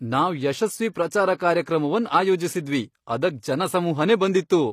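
Throughout the speech, treble above the core band sounds synthesized, with gritty, lispy s sounds and nothing above 15 kHz, likely HE-AAC compression at a bitrate near 24 kbps. Unlike plain low-pass dulling, the top stays bright but falsely metallic. Pre-echo appears at 0.92–0.95 s and again at 1.11 s: codec noise smears ahead of sharp attacks as a brief hiss. Unlike a click, it precedes and softens each onset.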